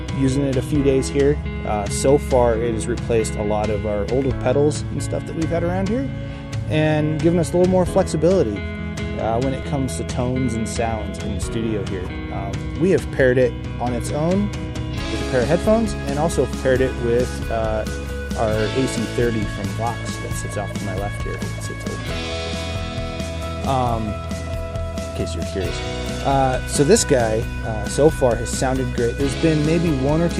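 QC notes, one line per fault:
9.63 s: repeated buffer. A 5 ms block of sound plays one extra time because fresh audio did not reach the output in time. The hard joins on such a short repeat make a click or brief buzz instead of an audible stutter, with essentially nothing lost.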